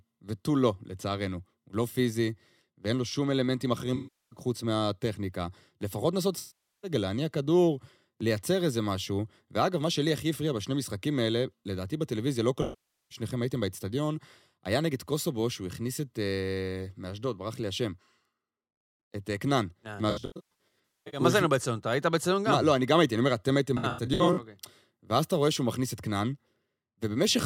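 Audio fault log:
3.95–4.39 s, 6.38–6.91 s, 12.62–13.18 s: AAC frame loss with concealment. About 0.36, 0.45 and 0.49 s of audio go missing, and the decoder fills each gap from the last good spectrum with scrambled phase. The sound smears into a noisy, phasey wash that sags in level before the signal returns.
20.10–21.20 s, 23.77–24.38 s: AAC frame loss with concealment, scattered. About 0.75 s is lost across 1.02 s, and 0.32 s across 0.60 s, with no run longer than roughly 150 ms. This gives a stuttering string of brief smeared patches.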